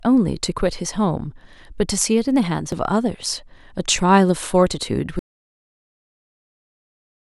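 At 2.72 s a repeated buffer appears: fresh audio arrived late, so one 2.67 ms block of the speech played a second time, which fits a 128-sample buffer. It is heard as a brief click. The waveform shows a tiny duplicated segment with a hard step at the join, and the spectrogram shows a thin vertical line.

From 5.19 s to the end there is an audio dropout to silence. The speech cuts off mid-flow into silence with no room tone, likely because the input was lost while silence kept being written. The waveform goes flat, and the spectrogram turns uniformly blank.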